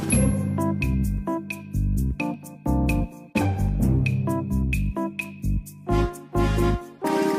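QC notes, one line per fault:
2.34 s, dropped samples: a single sharp click, likely from a tiny run of missing samples, a fraction of a millisecond's worth, so the waveform jumps straight to a later value. On a spectrogram it shows as one thin vertical line spanning the full frequency range.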